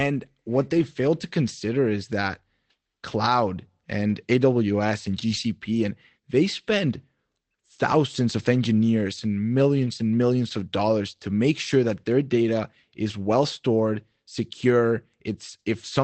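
In this speech recording, four short stretches turn briefly rough and grainy without any dropout: 0.73 to 0.83 s, just before "fail to consider is"; around 4.1 s, just before "aws and"; 5.29 to 5.35 s; and 9.87 to 9.93 s, between "of engineers and" and "and millions of dollars". These are lost packets rebuilt from error correction. The 60 ms, 20 ms and 40 ms patches fit runs of 20 ms Opus packets whose low-bitrate backup copies were decoded in their place. The call path itself is band-limited to about 8 kHz.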